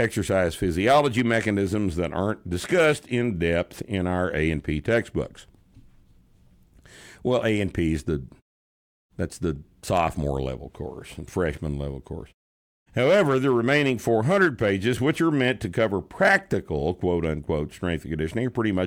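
Nothing goes wrong anywhere in this speech recording; the background slipping away to silence in the pauses and coming back just in time for the next sound is just the muting working as intended.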